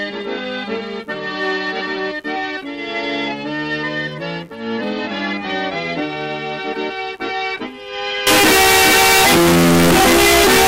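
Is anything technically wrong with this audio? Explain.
Yes. From 8.27 s to the end, the sound becomes suddenly very loud and harsh, with background noise as loud as the foreground. The likely cause is float read as integer: 32-bit float samples decoded as 32-bit integers, so the sign and exponent bits set each value. The waveform becomes a nearly square block at an almost fixed, high level, and the spectrogram fills with dense broadband energy. Pitch remains traceable.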